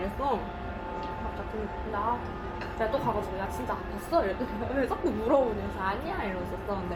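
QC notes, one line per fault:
Throughout: Bluetooth LC3 compression. The sounds carry a plainly audible grainy, breathy edge in the highs, likely from LC3 coding over a Bluetooth LE Audio link, which quantises the upper bands coarsely. The texture fits about 48 kbps with 10 ms frames.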